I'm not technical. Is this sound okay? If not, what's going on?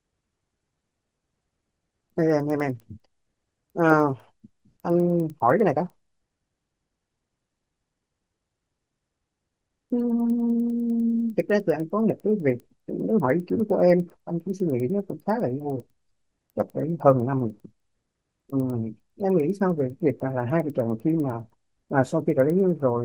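No. All through the speech there is a steady ticking, about ten ticks every second, heard only while sound is present. This is a resampler restarted on every block. The audio was converted to a new rate in chunks of 100 ms. Each chunk was handled alone, with no view of its neighbours. So every chunk boundary gets a tiny error, and those errors line up into a regular tick.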